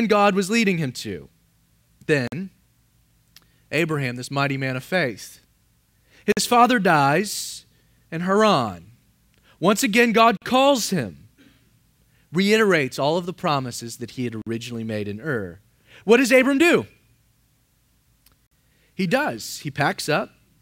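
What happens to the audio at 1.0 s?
Nothing goes wrong at 1.0 s; the speech there plays through intact, with no dropout, click or other fault.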